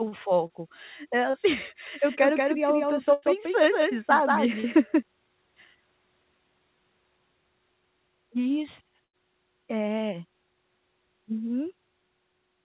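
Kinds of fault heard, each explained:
short concealed packet loss: About 30 ms of the call arrived too late at 0.47, 1.30 and 4.60 s. Each time the receiver stretched the last sound to cover the hole, then blended back, so the speech briefly smears or wobbles.
doubled audio track: From 1.86 to 5.03 s a second full-band copy of the speech runs about 200 ms behind, some 5 dB quieter. It has no room decay and cuts in and out abruptly, likely a second, slower capture path.
burst of packet loss: At 3.13 and 9.04 s about 90 ms went missing at once. The receiver held the last sound and faded it, giving a brief buzz or hiss. The speech then resumes further on, with that stretch gone.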